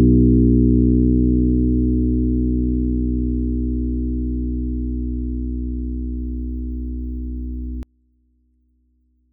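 From 7.83 s to the end, the likely cause is one channel inverted: a stereo side with reversed polarity, so the shared content cancels when the channels are summed to mono. The sound drops by about 33 dB, leaving only a faint residue.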